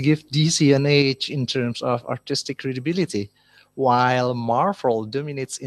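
At 1.02 s the speech and background drop together by about 5 dB, a microphone volume stepped down, likely automatic input-gain reduction; the waveform envelope shrinks abruptly there.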